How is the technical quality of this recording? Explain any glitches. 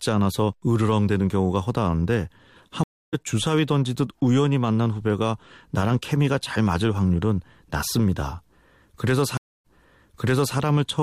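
The recording is marred by two stream reconnects. At 2.84 s the speech drops out for 0.29 s and resumes roughly a fifth of a second further on. At 9.37 s a 0.27 s gap is followed by 0.93 s of speech repeated. Each time the connection broke, and the player reconnected and restarted decoding mid-stream, skipping ahead or replaying a resent burst.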